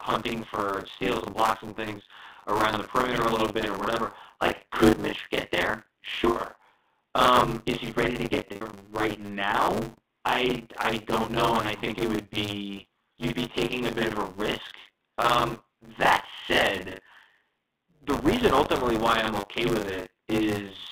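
From the start, the speech carries buffer tearing. The program filling the playback ring buffer and the hardware draining it have slipped, so they cross inside each period. Somewhat less than half of every buffer replays audio from a few tens of milliseconds earlier, with hard joins on both sides. The result is a steady 100 Hz robotic rattle that rides only on the speech, which points to a 10 ms buffer period. Unlike a codec buzz, it drops out in the pauses.

Packet loss with pitch repetition then breaks in three times over the narrow telephone band of the G.711 line. After "get there", 6.30 to 6.36 s loses 60 ms, and a brief held, buzzy pitch bridges the gap. After "is he ready to", losses scattered from 8.25 to 8.73 s total 330 ms, with no run longer than 90 ms. From 9.87 to 9.93 s, 60 ms is bridged just before "I I don't know". What separates these from tearing is that each is a passing event of repeated pitch, not a constant rattle.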